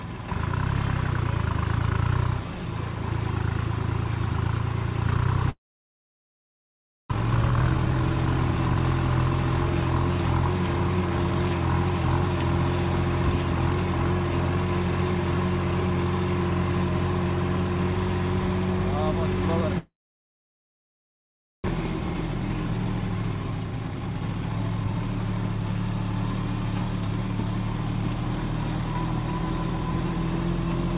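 From 5.5 s to 7.16 s the sound turns into a brief fading buzz and then about 1.5 s of near-silence, and it resumes with roughly a second missing. This is a long network dropout, likely a stretch of packets that never arrived, with the receiver concealing the gap.

From 7.19 s to 8.76 s the audio plays about 130% fast at unchanged pitch and sounds hurried. This is a jitter buffer speed-up: the late audio piled up, and the receiver trimmed short pitch-period slices, about half a second in total, to catch up.

The same pattern recurs. From 19.78 s to 21.7 s there is a fading fill, then about 1.7 s of quiet, with another second lost to a long network dropout. From 21.78 s to 24.99 s a speed-up of about 126% removes roughly a second of built-up delay. Throughout, nothing is heard above 4 kHz, consistent with the G.711 call path.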